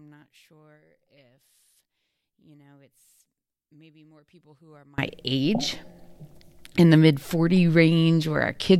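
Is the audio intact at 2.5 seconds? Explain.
No. At 2.5 seconds one stereo channel has likely been inverted in polarity, a condition that runs from the start of the clip to about 4.98 s. When the two channels are summed to mono, the speech common to both cancels, so the level drops by about 34 dB. The centred voice nearly vanishes, leaving only a faint residue of whatever differs between the channels until the polarity problem ends.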